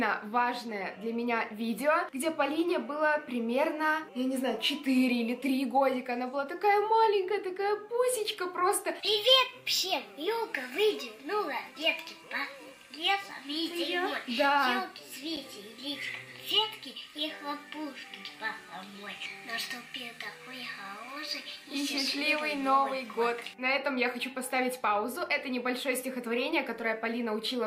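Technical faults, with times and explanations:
15.36 s, block of digital silence: a single sharp tick where the sound drops out for about 7 ms, too briefly to register as a gap. The samples fall straight to zero and return with no fade, so both abrupt edges merge into one click.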